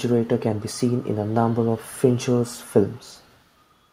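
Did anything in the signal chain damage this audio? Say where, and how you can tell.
Yes. There is an echo leak in call processing at 0.24–0.98, 1.14–1.34 and 2.39–3.42 s. A very faint copy of the speech trails 175 ms behind, likely loudspeaker pickup that the far-end echo canceller missed.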